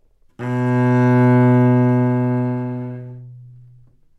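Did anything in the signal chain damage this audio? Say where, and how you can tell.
No, nothing in the signal chain damaged this sound.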